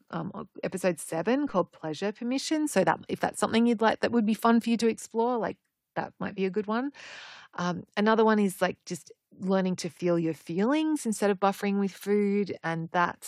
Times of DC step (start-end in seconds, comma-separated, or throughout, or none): 1.49